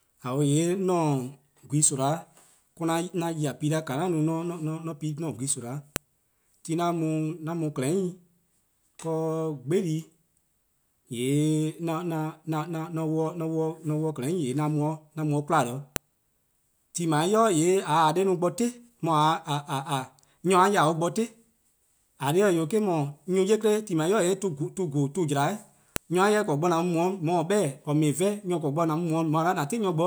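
At 5.96, 15.96 and 25.96 s, a sharp, loud snap cuts through the speech. This is a file header played as audio. Each 10 s piece kept its WAV header, whose bytes play as samples.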